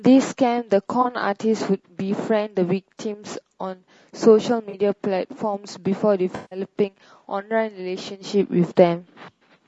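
Speech that sounds rough and grainy from start to finish, with noise filling the gaps between the voice's harmonics and a dull, somewhat synthetic top end. That texture most likely comes from low-delay AAC compression (AAC-ELD) at a low bitrate, consistent with about 32 kbps. Its very short frames resolve pitch harmonics poorly, so at this rate the encoder cannot keep the harmonic structure clean. Three brief patches break the flow with a smeared, noisy or phasey quality: two short ones at 1.01 to 1.06 s and 4.69 to 4.74 s, and a longer one from 6.35 to 6.59 s. These are AAC frame loss with concealment. Audio frames went missing, and the decoder covered each gap by re-synthesising from the last good spectrum rather than playing silence. The short patches fit about two lost frames each, and the longer stretch fits about eight in a row, which is why that smear lasts noticeably longer.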